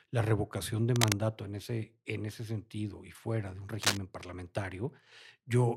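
Cable scratch noise shows up twice: from 0.96 to 1.13 s, right after "la revocación de", at roughly the speech's level, and from 3.81 to 3.97 s, after "y fuera de un", a little louder than the speech. Both are brief rough, rustling bursts, likely a worn cable or connector shifting.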